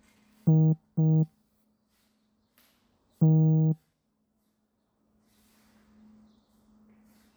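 No technical faults can be heard anywhere in these sounds; the signal stays intact and continuous throughout.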